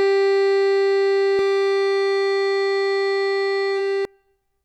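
From 1.39 s to 4.05 s, the music carries a doubled audio track. A second, full-band copy runs about 0.7 s behind the original, at roughly the same loudness. It has no decay and no room colour, so it reads as a clean repeat rather than an echo. It cuts in abruptly at 1.39 s and drops out just as suddenly at 4.05 s. The likely cause is a second capture through a slower path being mixed back in.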